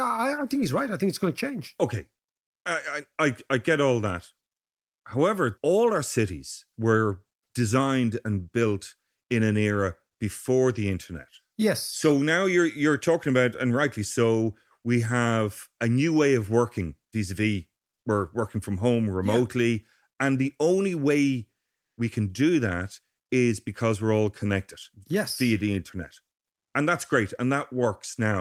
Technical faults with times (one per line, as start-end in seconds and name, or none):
21.79-21.97 comfort noise in place of the background